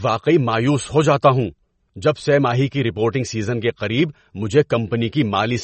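An MP3 encoder likely starved of bits, at a rate that fits roughly 32 kbps, has shaped this speech from start to finish: treble stops dead above about 8.3 kHz, and weak frequency lines flicker in and out, so the sound turns plainly watery and swirly, with smeared consonant attacks.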